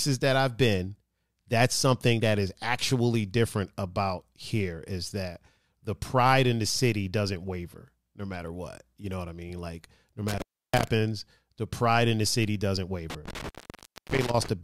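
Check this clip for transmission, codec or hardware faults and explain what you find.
There's an intermittent contact fault, twice. From 10.28 to 10.87 s and again from 13.10 to 14.49 s, right after "in the city doesn't", a loose plug or cable briefly opens. The audio crackles, drops to faint hiss for about 313 ms and then about 609 ms, and crackles back.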